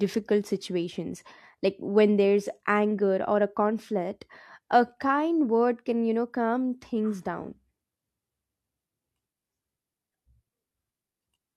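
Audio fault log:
No faults heard anywhere in this speech recording.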